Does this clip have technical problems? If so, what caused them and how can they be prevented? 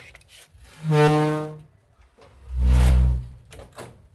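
Yes. A skip ahead occurs at about 1.07 to 1.09 s. Audio was dropped, either lost in transit or discarded by an overflowing jitter buffer while later audio was already queued. Roughly 0.7 s of sound is missing, and the two sides are butted together with no fill. Sizing the jitter buffer with enough headroom for delay bursts, so that late audio is not thrown away, would prevent this.

A jitter buffer speed-up follows from about 1.17 to 2.90 s. Too much audio was held, so the receiver repeatedly removed short pitch-period slices to shrink the backlog. The sound plays about 11% fast at unchanged pitch and sounds hurried, losing around a fifth of a second overall. A steadier network path, or a buffer that drains its backlog more gradually, would prevent this.

The call path itself used Opus at 32 kbps with audio bandwidth reaching 12 kHz.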